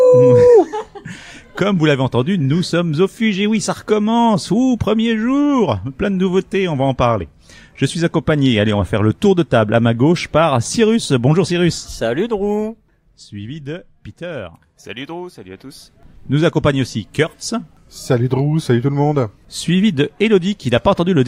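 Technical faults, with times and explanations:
11.92–13.3 s and 15.42–16.42 s, zipper noise: the level falls about 15 dB in the first span and climbs about 15 dB in the second, in unsmoothed steps at roughly 50 a second; each jump clicks, so a fine zipping rides on the moving sound.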